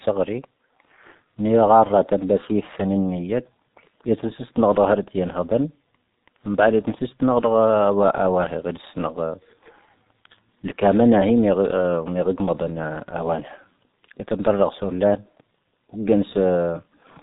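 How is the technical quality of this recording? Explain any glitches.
Quality is poor throughout, due to heavy G.723.1 codec damage across the whole recording. The speech is muffled, with nothing above 4 kHz. The coder models the voice in coarse 30 ms frames, so the speech sounds hoarse and consonants blur. The damage fits a low-rate stream near 6 kbit/s.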